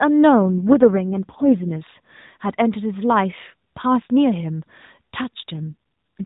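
From 0.41 to 1.85 s, and again from 5.54 to 6.24 s, there's an AMR rate drop. The speech goes rougher and more synthetic with no gap and no change in band, which fits the codec stepping down from its 12.2 kbps mode to 4.75 kbps.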